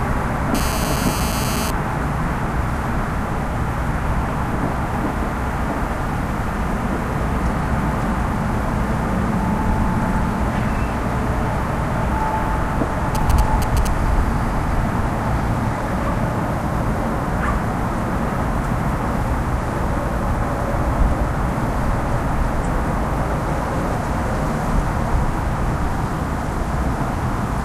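From 0.55 to 1.71 s there is GSM phone buzz. A 2G phone nearby was on a call, sending radio bursts 217 times a second. The audio circuit rectified those pulses and turned them into sound. The result is a hard, raspy buzz at 217 Hz, full of harmonics. It has no relation to the sound being recorded. It sits about 8 dB below the signal and is nearly steady.

From 13.15 to 13.87 s come GSM signalling bursts. Here the phone sent only short groups of bursts, as it does while signalling to the network. The circuit rectified these too. They come through as a galloping dit-dit-dit pattern of brief 217 Hz buzzes. The level is roughly 10 dB under the signal. The pattern stops and starts rather than droning.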